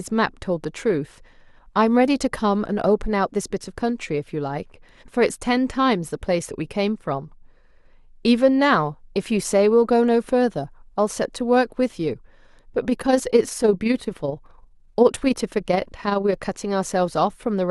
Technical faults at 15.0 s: overlap-add ripple

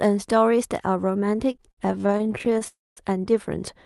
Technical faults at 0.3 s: none

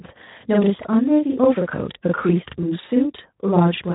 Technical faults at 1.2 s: channel delay (doubling); Speex codec

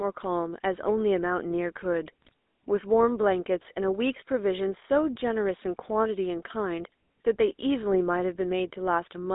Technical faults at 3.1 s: GSM full-rate codec

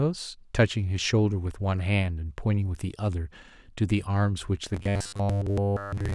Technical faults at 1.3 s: none

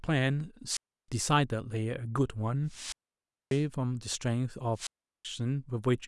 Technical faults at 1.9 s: none

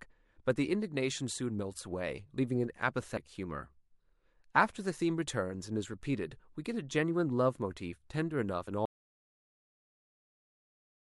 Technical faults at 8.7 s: damaged data in a compressed stream

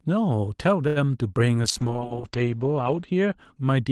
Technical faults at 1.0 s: short stall from a late packet

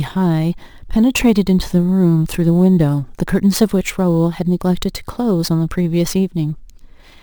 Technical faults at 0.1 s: imaging from sample-and-hold upsampling

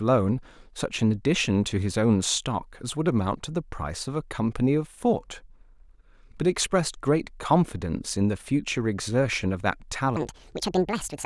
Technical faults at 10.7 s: section at the wrong speed

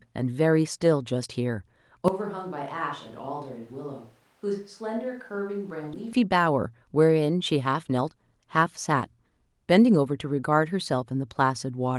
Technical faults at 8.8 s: jitter buffer speed-up

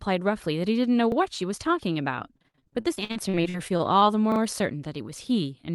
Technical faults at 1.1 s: repeated buffer

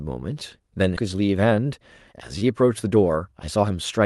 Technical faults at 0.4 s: repeated buffer

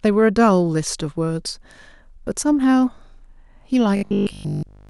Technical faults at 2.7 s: none

